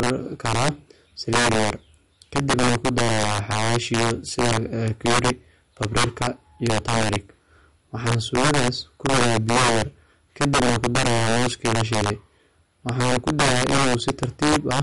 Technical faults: integer overflow; MP3 compression

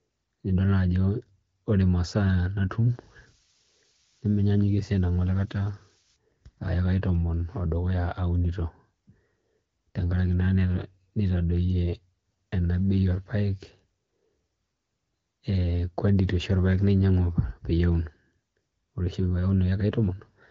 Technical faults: switching supply whistle

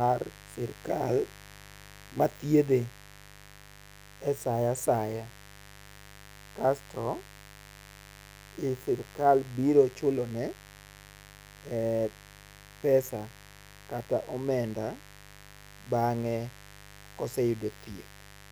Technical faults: mains buzz

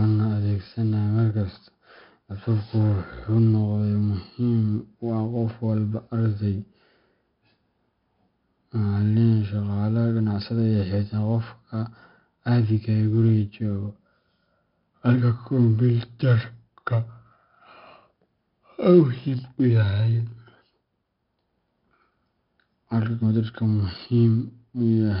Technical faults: 4-bit ADPCM compression

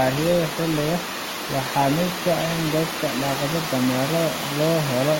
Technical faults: adaptive stream starting at a low bitrate

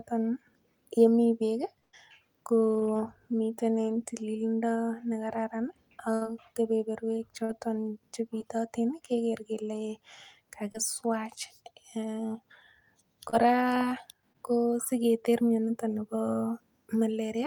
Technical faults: burst of packet loss; short concealed packet loss

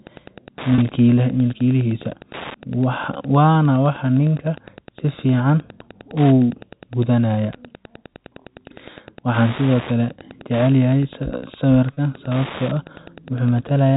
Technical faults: Wi-Fi interference; packet loss with pitch repetition

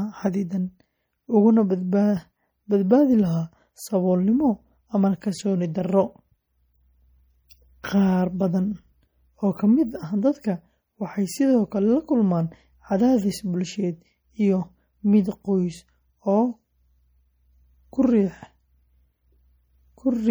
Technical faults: MP3 compression

